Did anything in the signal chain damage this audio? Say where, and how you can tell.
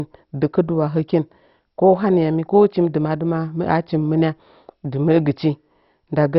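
Yes. The damage is at the codec stage, likely MP2 compression. Throughout the speech, nothing survives above 5.6 kHz, so it sounds dull. Upper sub-bands were starved of bits and switched off. The remaining bands are coarsely quantised, giving heavy gurgling grain that fits a very low bitrate near 32 kbps.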